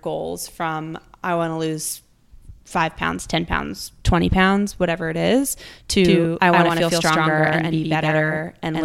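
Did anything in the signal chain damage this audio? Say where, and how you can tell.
Yes. From 6.05 s to the end, the speech has a doubled audio track. A second full-band copy about as loud as the original trails it by around a tenth of a second. It starts abruptly, with no decay or room colour. A second, slower capture path in the driver or routing is the likely cause.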